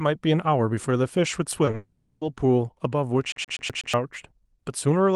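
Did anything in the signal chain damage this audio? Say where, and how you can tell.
Yes. At the network stage, the call shows two brief short concealed packet loss events, at 1.65 to 1.69 s and 1.71 to 1.75 s. Each is a 20 ms hole, which fits one lost Opus frame. The speech smears and wobbles there rather than cutting out. The receiver kept the last stretch of sound going, pitched or noise-like to match, then crossfaded back into the real audio when packets resumed.

Right after, from 1.75 to 2.23 s, about 0.48 s of audio is replaced by a continuation of the preceding sound that buzzes and decays without ever reaching true silence. Speech then resumes further along, with that span simply gone. This is likely a long network dropout, where the jitter buffer ran dry and concealment stretched the last frames across the whole gap.

At playback from storage, 3.32 to 3.94 s shows a CD stuck on one turn. 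A 0.12 s piece of speech repeats five times in a fast, even stutter, with a tiny mute at each jump back. That regular loop length is the giveaway: a scratched disc kept throwing the pickup back one track at the same point on every revolution until it broke free.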